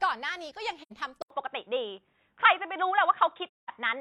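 A speech recording with two kinds of fault. At 0.82 s the sound fades out and back in over a soft-edged gap of about 85 ms, ending at 0.92 s. A second, longer hole runs from 3.47 to 3.70 s, about 213 ms. Both are AAC frame loss with muting. The decoder filled the missing blocks with zero spectrum, and its overlapping windows smoothed the edges into fades. The lengths fit two lost frames and five lost frames. At 1.22 s there is a brief dropout of about 80 ms, and from then to the end the speech sounds dull and boxy. Nothing remains above 3.8 kHz, the level shifts by around 5 dB, and a new background noise sits roughly 50 dB below the speech. This is likely an input switched to a poorer device, such as a different microphone or a headset's narrowband call profile taking over mid-recording.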